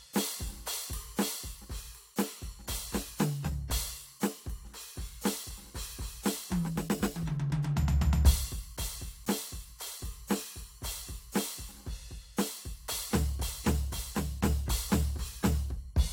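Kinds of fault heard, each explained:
No audible faults in this music recording.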